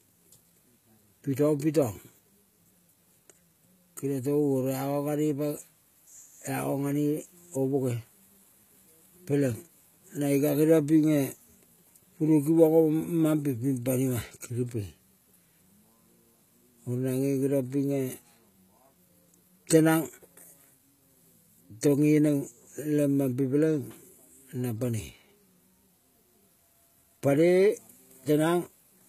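Throughout, the treble sounds rebuilt rather than recorded, likely from HE-AAC compression at a very low bitrate. Sibilants turn gritty and metallic. Nothing sits above 14.9 kHz.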